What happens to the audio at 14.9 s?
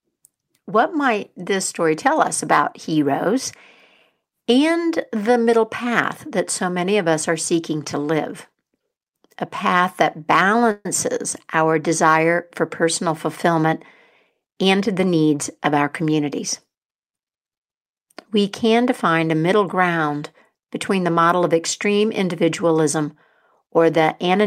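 Right after "desire for personal fulfillment", from 14.30 to 16.01 s, speech rushes at about 108% speed with unchanged pitch: a jitter buffer speed-up trimming roughly 150 ms of pitch periods.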